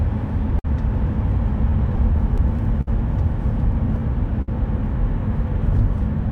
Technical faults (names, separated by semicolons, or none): clock drift between sender and receiver; repeated timing corrections; short stall from a late packet; repeated stalls (stutter)